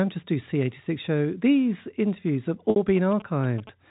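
A short stretch of telephone speech, carried over G.711 coding that passes nothing above 4 kHz, loses data at 2.70 s, just after "interviews have". That is packet loss with pitch repetition: the receiver covers the 60 ms gap, which fits three 20 ms packets, by repeating the last pitch period, so the sound briefly holds as a slightly buzzy, frozen tone until 2.76 s. From 2.97 s to the end, a nearby 2G phone exchanging signalling with its network induces GSM signalling bursts that the audio circuitry rectifies, adding a galloping dit-dit-dit of short 217 Hz buzzes that sits well below the speech.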